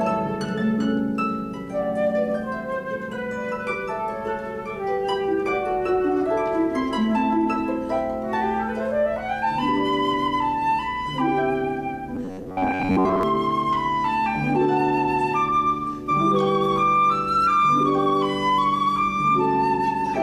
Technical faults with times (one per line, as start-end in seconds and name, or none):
12.15-13.23 robotic sound from repeated short buffers